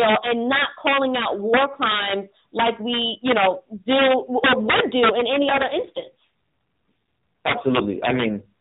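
A speech recording carried over the AMR-NB mobile codec, which limits it to below 4 kHz. Integer overflow runs throughout: gain pushed about 6 dB too hot makes a small share of peaks wrap to the opposite sign, producing violent cracks far sharper than clipping's flattened buzz. After "would do", from 5.12 to 8.42 s, an AMR rate drop from 12.2 to 5.9 kbps turns the voice rougher and more synthetic, with no gap or bandwidth change, unlike packet loss.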